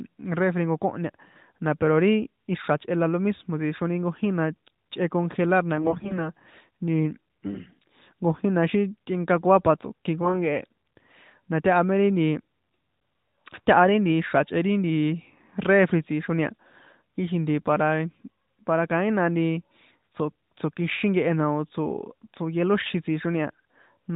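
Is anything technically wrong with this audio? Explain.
Yes. From 5.77 to 6.30 s the speech shows AMR bit errors. Over a poor link, roughly one bit in ten of the less protected bits in each frame arrived corrupted, while the check on the critical bits still passed, so the decoder used the frames anyway. Misplaced excitation pulses and skewed pitch, gain and spectral values leave the speech near its normal pitch and loudness but hoarse, scratchy and gargly for about half a second. That span fits roughly twenty damaged 20 ms frames. Around it, the AMR narrowband mobile codec caps the audio below 4 kHz with only light coding damage, which fits the 12.2 kbps mode.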